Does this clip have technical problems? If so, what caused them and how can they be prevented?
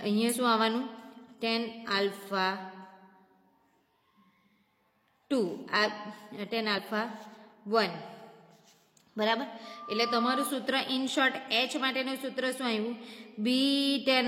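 Yes. There are two brief bursts of damaged data in a compressed stream, at 0.28 to 0.35 s and 6.74 to 6.80 s. Each lasts well under a tenth of a second. The sound breaks up briefly there. Bad bytes made the decoder misread those frames. It lost sync and skipped ahead to the next valid frame header. Checksummed transfer and error-checked storage would prevent this.

A loudspeaker feedback squeal runs from 9.64 to 10.60 s. It is a steady 1.2 kHz tone. It rises over about half a second and ends up louder than the sound itself. The microphone was hearing the loudspeaker it fed. At 1.2 kHz the loop gain went above one, so the tone fed itself and grew. Lower the gain, move the microphone away from the speaker, or notch out 1.2 kHz.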